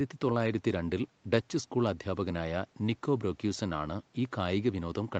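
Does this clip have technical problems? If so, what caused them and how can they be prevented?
No, there's nothing wrong here; the speech just has the usual call-line sound, with nothing above about 8 kHz, which fits an Opus call at around 32 kbps working as it should.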